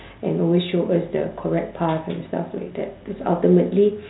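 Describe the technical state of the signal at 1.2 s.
Bit errors on the ADPCM link strike from 1.10 to 1.16 s. Flipped bits derail the decoder's predictor, so a rough pop rings on briefly.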